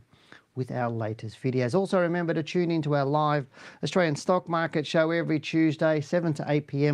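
A speech recording with no audible technical faults anywhere in the signal.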